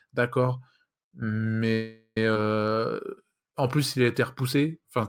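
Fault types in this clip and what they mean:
Call audio freeze: From 1.73 to 2.17 s the sound stalls and the last bit gets stretched into a fading buzz or hiss that drops to silence for its final 70 ms, likely because packets got held up and the jitter buffer ran dry. The audio then resumes where it stopped, with nothing lost.
Skip ahead: At 2.34 s playback jumps forward with only a tiny gap. Roughly a third of a second of audio is simply gone, dropped while later audio was already queued, and the two sides are butted almost straight together.
Jitter buffer slow-down: From 2.69 to 5.03 s the receiver builds up a reserve by repeating single pitch periods and bits of pauses, adding 207 ms in total. Everything plays at 91% speed with the pitch unchanged, so sounds come out drawn out.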